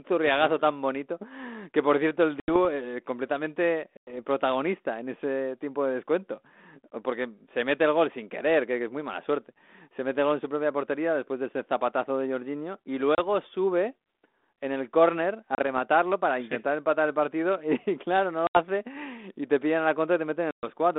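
Packet loss on an ADPCM call hits six times: 2.4 s (80 ms gone), 3.97 s (100 ms), 13.15 s (30 ms), 15.55 s (30 ms), 18.47 s (80 ms) and 20.51 s (120 ms). Each is a hard-edged silent gap where a handful of packets went missing. Because the decoder's predictor and step size lose track of the sender's, the speech comes back slightly distorted, then settles within some tens of milliseconds. All of this sits on light G.726 coloring with a telephone band running from 200 Hz to 3.6 kHz.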